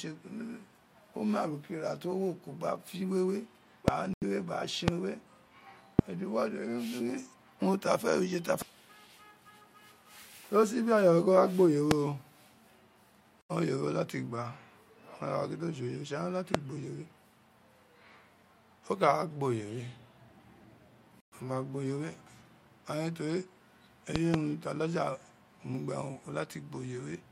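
Loud pop at 3.88 s: a single sharp click about 20 dB above the speech, most likely a voltage spike from a switch, static discharge or driver glitch. The speech continues beneath it. A Bluetooth stall follows at 4.14 s, cutting the sound to silence for 83 ms. The likely cause is interference delaying packets until the headphone buffer ran dry. Playback resumes once the resent data arrives. Further single loud pops, each about 25 dB above the speech, land at 4.88 s, 5.99 s and 11.91 s. A second Bluetooth stall at 13.41 s drops out for 82 ms. Another loud pop of about 25 dB hits at 16.55 s, right after "la ti". The longest Bluetooth stall, at 21.20 s, leaves 117 ms of silence before "ama o". Finally, from 24.16 s to 24.36 s, a double loud pop sounds as two thumps in quick succession, each about 20 dB above the speech, as likely electrical pulses ride over the speech.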